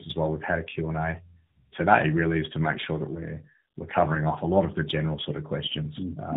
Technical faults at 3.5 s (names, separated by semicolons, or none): tandem speech coding